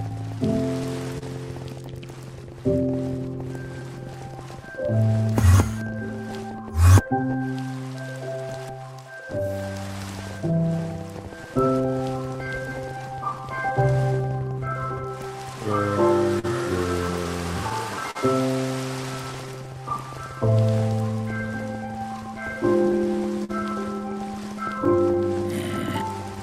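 Clock drift between sender and receiver runs through the whole clip. The sender's clock is slower than the receiver's, by roughly 3 percent. The receiver's jitter buffer keeps draining as a result. It cannot hold a steady fill. So the timing stays slightly unsteady from start to end. Small hiccups recur at uneven spacing rather than on a fixed beat.

Scattered short gaps appear first, from 0.09 to 1.23 s. About four brief holes fall in this stretch. The longest is around 30 ms. Each hole is patched by stretching the last sound forward. The audio stays clear, but tiny ticks or smears break through.

Repeated timing corrections start at 0.56 s and continue to 25.35 s. The receiver keeps repeating short pieces to match the slow sender. Playback runs at 98 percent speed. The repeats add up to roughly half a second. Each edit is small and goes the same way. Any that come through are heard as slight hiccups or an unsteady tempo.

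More scattered short gaps arrive between 16.39 and 18.17 s. There are about three, the longest near 40 ms. The last group runs from 22.92 to 26.38 s. It has about four gaps, again up to about 40 ms. Both groups sound like brief smears or clicks. Lost or late packets caused these holes.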